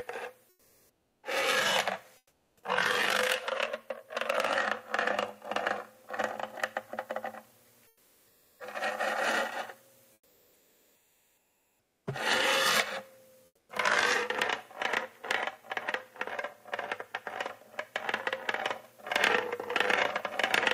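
Everyday sound where the quiet background between louder events is five times swapped for comfort noise in place of the background: 0.49–1.23 s, 2.17–2.63 s, 7.87–8.59 s, 10.13–12.05 s and 13.45–13.69 s. There the real ambience turns into steady, featureless hiss, about 1 to 11 dB quieter, likely Opus discontinuous transmission. A spectrogram shows a smooth, evenly textured band, and the waveform a flat, uniform envelope.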